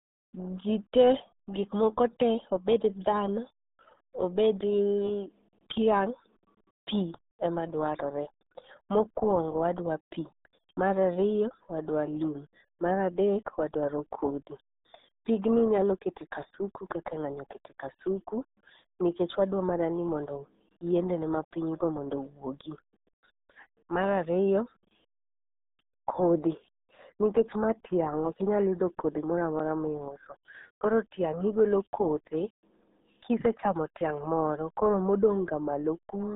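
Speech passes through the RealAudio 14.4 codec for its full length: nothing above 3.8 kHz survives, the band sits between 200 Hz and 3.7 kHz, and heavy coding damage leaves it muffled and gargly, consistent with an 8 kbit/s dial-up-era speech coder.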